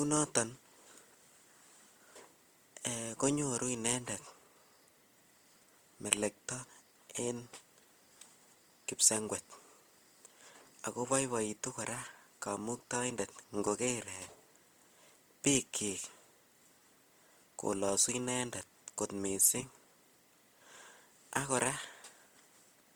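A speech clip with two separate problems. All the way through, the sound is grainy and rough, with a noisy, sandpapery texture instead of clean tones, and that damage is plainly audible. That's the signature of Opus compression, likely at a low rate; the graininess points to the codec's music mode running short of bits, which fits something around 24 kbps, and the band-filling keeps full bandwidth rather than muffling it. On top of that there are periodic USB or driver dropouts: from 0.17 s to 15.67 s a tiny tick lands every 0.5 s, roughly thirty of them, each a gap of about a millisecond of silence, so it comes across as a steady clicking under the speech. That even spacing is what you get when something in the background stalls the USB bus or audio driver on a fixed schedule and the lost audio is replaced with nothing.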